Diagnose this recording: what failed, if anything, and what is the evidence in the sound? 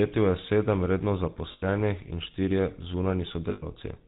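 The whole clip is damaged by the GSM full-rate codec at the codec stage. The speech has a buzzy, gravelly roughness, and a spectrogram shows a hard ceiling at 4 kHz with a coarse, pulse-like texture. A vocal-tract filter was driven by a sparse, regularly spaced excitation, which fits the 13 kbps full-rate mode.

Lost GSM frames, arising in the network path, appear at 1.52–1.65 s and 3.50–3.65 s. In each gap the sound freezes into a rough, metallic ring. A spectrogram shows frozen horizontal bands, and the waveform shows a repeating pattern. The decoder replayed the last good frame's settings.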